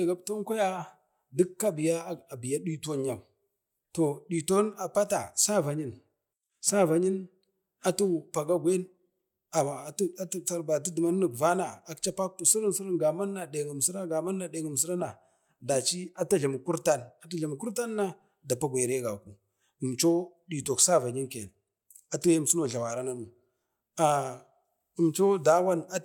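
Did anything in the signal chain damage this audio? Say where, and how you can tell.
No, nothing in the signal chain audibly damaged this speech recording, and the signal holds steady throughout with no disturbance traceable to any stage between capture and playback.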